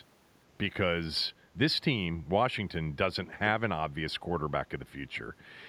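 A speech clip with one echo leak. From 3.24 to 3.35 s, a faint delayed copy of the speech returns, about 465 ms late and well below the main level. This is likely a far-end loudspeaker echo that its canceller failed to remove.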